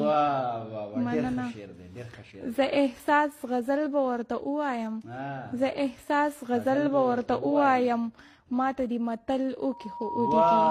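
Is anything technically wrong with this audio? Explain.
Yes, there's loudspeaker feedback squeal from about 9.70 s to the end at 10.70 s. A steady tone near 951 Hz swells over most of a second and ends up a few dB louder than the rest of the sound. That happens when the mic hears its own speaker and the loop gain tops one at that frequency.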